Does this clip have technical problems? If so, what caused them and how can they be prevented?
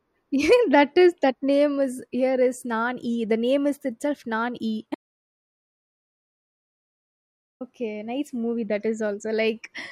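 Yes. An audio dropout to silence runs from 4.95 to 7.61 s, about 2.66 s of dead silence with no room tone, the speech resuming on "nice movie that". The likely cause is a lost input or stray mute while recording continued. Secure connections and monitor input levels during capture.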